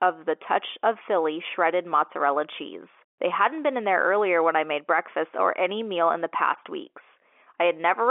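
The speech shows no technical faults, with its content held inside the usual telephone band of 300 Hz to 3.4 kHz and nothing above 3.7 kHz, as G.711 telephone coding delivers it.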